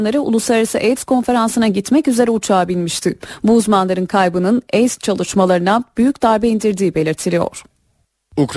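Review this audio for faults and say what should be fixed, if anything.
Aliasing runs throughout the speech: content above 12 kHz folds back as gritty, metallic sibilance around 25 dB down, which fits a 44.1 kHz to 24 kHz drop without filtering. Apply a steep anti-aliasing low-pass below 12 kHz before any sample-rate reduction.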